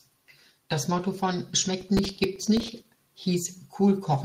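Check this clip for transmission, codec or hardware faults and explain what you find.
Two faults are present, one from transmission and one from processor overload.

From 0.93 to 0.99 s, a lost packet rebuilt from error correction: about 40 ms, likely two lost packets, replayed from low-bitrate backup copies, sounding briefly rough and noisy without a gap.

From 1.66 to 2.68 s, processor overload crackle: around twenty missed deadlines, consistent with roughly 3 ms buffers, each filled with stale audio, producing gritty, hard-edged crackle over the speech.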